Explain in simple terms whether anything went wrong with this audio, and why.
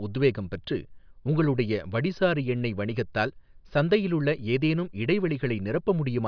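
Nothing went wrong with this audio that a listener can hear.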